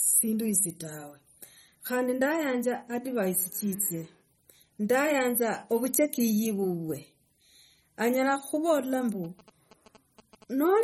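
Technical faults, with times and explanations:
Throughout: MP3 compression. Nothing is present above 15.5 kHz, and the speech has a watery, swirling texture with smeared consonant attacks. This likely comes from an encoder starved of bits, which fits a rate near 32 kbps. Unlike a plain low-pass filter, weak detail flickers on and off.
9.24 to 10.67 s: GSM signalling bursts. A nearby 2G phone exchanging control bursts gets rectified by the audio circuitry. The result is a galloping dit-dit-dit of short buzzes at a 217 Hz repeat rate, about 25 dB below the speech. Its stuttering rhythm distinguishes it from steady mains hum.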